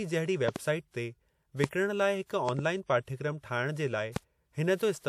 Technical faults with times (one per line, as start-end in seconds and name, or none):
0.48-0.58 loud pop
1.64-1.66 loud pop
2.49-2.61 loud pop
4.16-4.19 loud pop